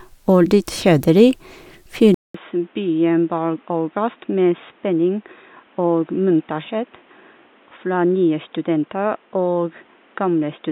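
At 2.14 s the speech drops out for about 200 ms, then returns dull and boxy, with nothing above 3.8 kHz, roughly 10 dB quieter, and over a faint new background noise some 35 dB below the voice. That character holds to the end of the clip. The likely cause is an input switched to a poorer device mid-recording: the narrower band, lower level and different noise floor all belong to a second, lower-grade microphone or headset path.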